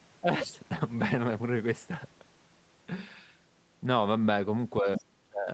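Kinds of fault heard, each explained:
Speech suppressed in double talk: A brief dip of about 10 dB near 0.21 to 0.27 s, then a deep cut of about 30 dB across 4.81 to 5.48 s, likely from the echo canceller ducking the talker while the far side spoke. Waveform shows the envelope collapsing; spectrogram shows energy thinning to gaps.
Other side's voice leaking through: Around 4.95 to 5.0 s a short scrap of a second voice sits about 10 dB below the speech, likely residual loudspeaker echo the canceller failed to remove. On a spectrogram it appears as faint, separate harmonic traces inside the suppressed region.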